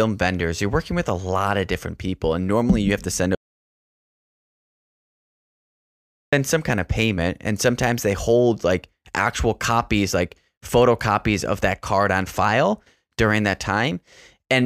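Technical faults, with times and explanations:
3.35–6.33 s: audio dropout to silence. Speech cuts out for 2.98 s, likely from a lost input. The waveform goes flat and silent, with a blank spectrogram column.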